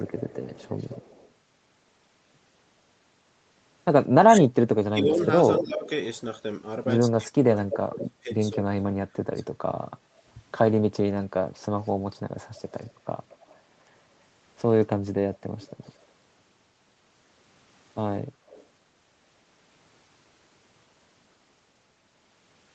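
Speech, carried over an Opus call path limited to 8 kHz, with two recurring faults. An echo leak puts a delayed copy of the audio at 0.06–1.29 s, 5.2–5.89 s, 7.99–8.08 s, 11.83–13.59 s, 15.35–16.05 s and 18.47–18.66 s. It trails by about 0.2 s, drifting from 197 to 225 ms, and sits roughly 15 to 30 dB down, rising to about 5 dB down at 5.2 s. The likely cause is a far-end echo canceller leaving loudspeaker pickup in the returned signal. Speech suppressed in double talk shows as level dips of up to about 20 dB across 4.26–5.87 s and about 30 dB across 7.14–9.28 s, under a second and around one and a half seconds of audio respectively, probably from the canceller attenuating both talkers at once.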